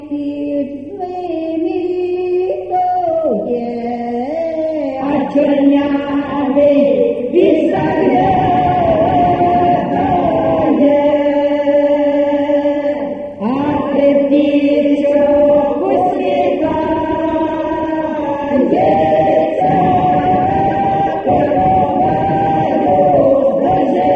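Nothing in this audio stands out as a technical problem, so there's nothing here to flag or trace back to a cause.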